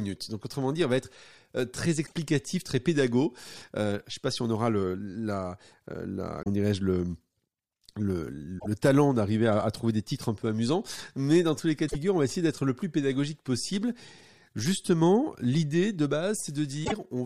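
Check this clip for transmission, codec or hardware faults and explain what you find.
Five brief faults from damaged data in a compressed stream break up this speech clip, at 2.03–2.13 s (just before "très pédagogique"), 6.39–6.47 s, 8.56–8.66 s (before "talent d'arriver à à"), 11.85–11.96 s (between "dans tous les cas" and "on va essayer d'être") and 16.81–16.92 s. Corrupted bytes make the decoder misread or drop frames and hunt for the next valid header. Each roughly 0.1 s event is an abrupt interruption: a chirp, squawk, click or short hole. On a spectrogram or waveform it appears as a narrow patch where the speech pattern suddenly breaks off.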